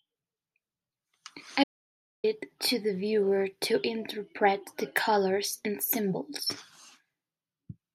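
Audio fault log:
1.64–2.24 s, audio dropout to silence: the input feed was likely interrupted, perhaps by a loose connection or a momentary mute, while the recorder kept writing silence in its place. The speech stops abruptly mid-flow and falls into dead digital silence, with no room tone or background hiss, for about 0.6 s. Whatever was spoken in that stretch is lost, and the audio resumes directly on "it to the viewer".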